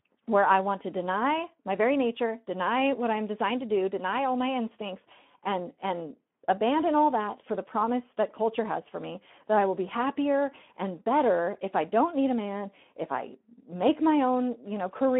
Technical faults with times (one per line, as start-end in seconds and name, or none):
0.00-15.19 Speex codec